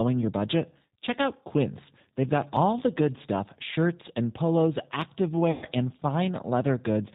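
Speech runs through the G.729 codec for the whole clip, with plainly audible coding damage that fits G.729A at 8 kbit/s. The decoder rebuilds each 10 ms frame from a vocal tract filter, a pitch predictor and a handful of pulses, so the sound is band-limited to below 4 kHz and has a rough, slightly synthetic texture, with the dulled upper range and grainy edge typical of this low-rate parametric coding. At 2.57 s, just before "the good stuff shirts", there is a small forward jump in the sound, and at 5.02 s, right after "stuff shirts and polos", there is a similar, slightly larger jump. Both are dropped buffers (overruns), with the likely cause being that the capture side failed to read its samples before the hardware overwrote them. About 5 ms and about 10 ms of audio vanish, and the two sides are butted together with no gap, so the discontinuity is heard as a jump rather than a dropout. 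From 5.51 s to 5.67 s comes VoIP packet loss concealed by the speech codec, covering about 110 ms, which fits eleven lost 10 ms frames. The decoder repeats its last pitch and filter state with falling gain, so the sound smears into a buzzy tone or coloured noise that fades. Because the codec's prediction carries over from frame to frame, it stays weakened or distorted briefly after real packets resume at 5.67 s.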